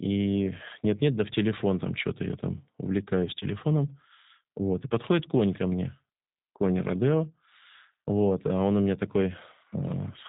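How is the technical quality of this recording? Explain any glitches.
The recording is band-limited and audibly coded throughout. G.729 codec damage runs the whole clip: speech is rebuilt from a vocal-tract filter, pitch predictor and sparse pulses, consistent with an 8 kbit/s G.729A stream, so it sounds rough and synthetic, with nothing above 4 kHz.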